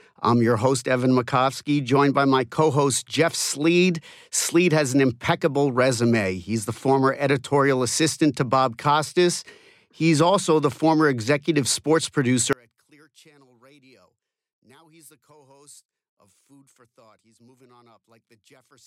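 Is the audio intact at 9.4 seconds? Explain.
Yes, at 9.4 seconds the speech is intact, with no dropout, click, distortion or other fault to be heard at that point.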